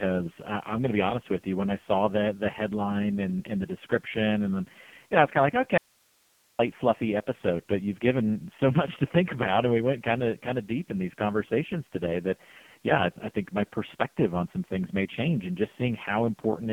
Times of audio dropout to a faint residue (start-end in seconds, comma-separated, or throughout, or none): 5.78-6.59